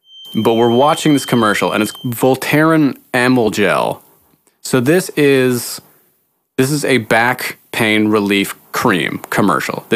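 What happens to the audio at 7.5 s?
Nothing goes wrong at 7.5 s; the speech carries on intact through that moment, with no dropout, glitch or other audible fault.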